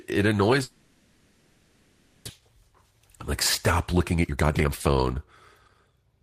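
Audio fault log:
0.63–2.31 s, long network dropout: the sound smears into a continued buzz that fades but never reaches silence, and about 1 s of audio never returns. The cause is likely a stall of roughly 0.7 s in arriving packets. On a spectrogram, flat, blurred harmonic bands replace normal structure. The waveform shows a smooth, decaying envelope.
2.39–3.01 s, 3.92–5.27 s, 5.70–6.20 s, jitter buffer speed-up: after the backlog, the receiver trims one or a few pitch periods repeatedly to shrink its queue. Speech runs at 109%, 133% (about half a second removed) and 109%, hurried but at unchanged pitch. The spectrogram shows compressed syllable spacing, and the waveform has tiny splice points.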